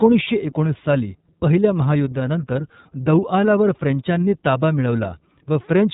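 Throughout, the speech carries iLBC codec damage. Nothing passes above 3.8 kHz. Each 30 ms frame is coded independently, leaving a plainly rough, synthetic edge.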